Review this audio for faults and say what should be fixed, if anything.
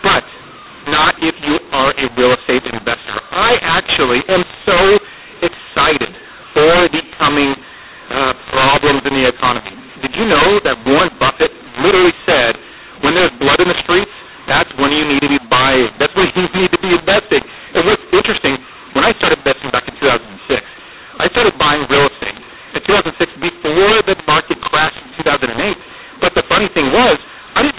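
Mu-law and A-law mixed up, throughout: speech coded as A-law is decoded as mu-law, scrambling levels so the speech turns harsh and pauses fill with noise. To prevent it, make sure the decoder uses the same G.711 law the sender encoded with, here A-law.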